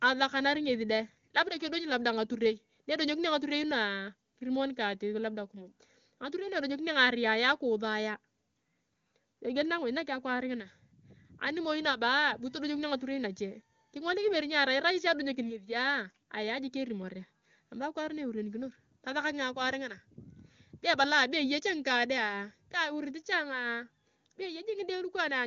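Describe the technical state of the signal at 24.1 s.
At 24.1 s the speech is intact, carried through the AMR wideband (HD Voice) codec with content stopping at about 7.2 kHz, and its clarity points to one of the codec's top rates, around 23.85 kbit/s.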